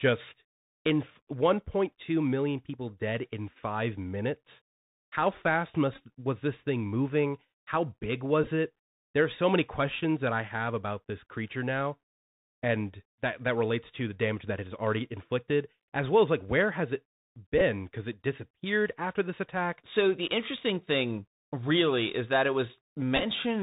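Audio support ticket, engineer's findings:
Band-limited speech throughout, granular hiss underneath, scratchy s sounds, loud highs distorting. Bluetooth CVSD headset codec: one-bit up/down coding at 64 kHz with adaptive step; nothing above 4 kHz.

Brief buzzy stutters at 5.94 s (before "was this thing moving"), 8.43, 17.58 and 23.17 s, each under 0.1 s. Bluetooth headset packet repeated: lost packets re-decoded every 3.75 ms, buzzing near 267 Hz.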